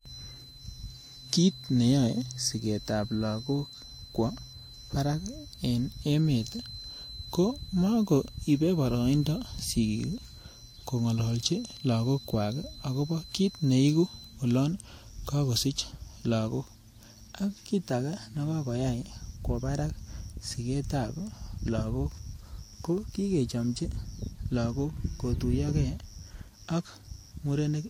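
From the first second to the end, the speech carries transcoding between lossy codecs. The band stops cleanly at 16.6 kHz, and two layers of artefacts sit on top of each other: a coarse, smeared high end that suggests an older codec at a moderate rate, then the swirly, watery texture of a low-rate Vorbis-style encoder working over that damaged material. This is likely a chain of two lossy encodes. The second stage wastes bits re-coding the first stage's errors and adds its own.

Also from 0.0 s, and running until 14.41 s, a thin steady tone at 4 kHz sits roughly 20 dB under the speech. It swells and fades slowly in level. It stops just before "olon kagosich lagok". This is a feedback whistle, likely from a loudspeaker-to-microphone loop held right at the edge of instability, so a single frequency keeps ringing without running away into a howl.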